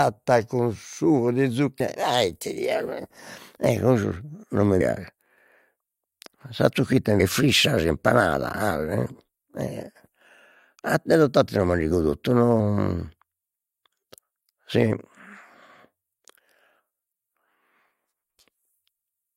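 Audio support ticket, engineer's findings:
Compressed frames skipped at 1.79 s after "con sugo di", 4.80 s, 7.19 s between "sa zocchitta mi" and "frissa impanada", and 12.59 s. Speech jumps ahead about 100 to 300 ms, whole 21.3 ms frames missing or rejected by the decoder.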